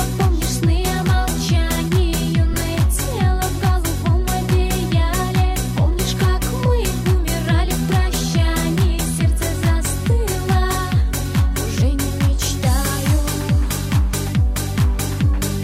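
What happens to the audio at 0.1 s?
Nothing goes wrong at 0.1 s: the audio plays through that moment intact, with no dropout, click, glitch or other audible fault.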